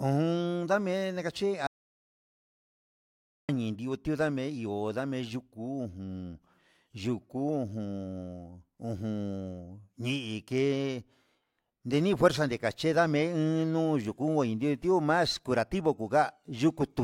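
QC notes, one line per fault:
1.67–3.49 s, audio dropout to silence: the speech cuts off abruptly mid-flow and about 1.82 s of silence follows before the audio snaps straight back in. There's no room tone or hiss in the gap at all, which tells you the recorder kept writing silence rather than picking up a quiet room. Most likely the input was lost briefly, from a loose connection or a momentary mute, so whatever was said in that stretch is gone.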